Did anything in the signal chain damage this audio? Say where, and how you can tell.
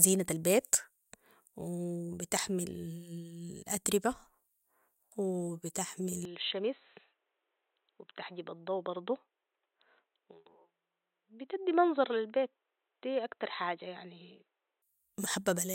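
Yes, at the input stage: from 6.25 to 14.82 s the speech goes dull, loses everything above 4 kHz, and drops about 5 dB, likely an input switch to a poorer device.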